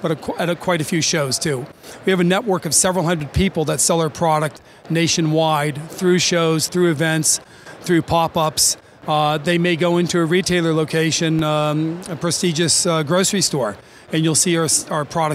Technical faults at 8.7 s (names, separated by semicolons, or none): none